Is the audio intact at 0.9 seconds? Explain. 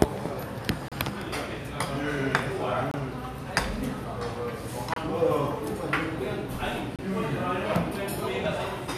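No. From 0.88 to 0.92 s the sound drops into a hard-edged silent hole about 32 ms long. This is a gap between stream segments: the timestamps at the 2-second segment boundary leave a small gap, and the player fills it with silence. Nothing is lost, just delayed.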